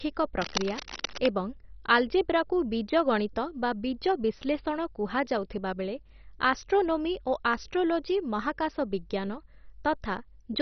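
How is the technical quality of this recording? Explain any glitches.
The technical quality is poor, with a dull, heavily coded sound and a burst of scratching near the start.

Throughout, the speech is muffled and gurgling, with nothing above 6.1 kHz. This is likely MP2 compression at a very low rate, consistent with about 32 kbps, where upper sub-bands are switched off and the rest coarsely quantised. A spectrogram shows a hard ceiling with patchy, flickering bands below it.

From 0.41 to 1.32 s, dense, uneven rustling sits over the speech, nearly as loud as it. This is likely cable scratch noise from a worn contact changing resistance as it moves. The waveform shows ragged spiky bursts, and the spectrogram shows broadband speckle.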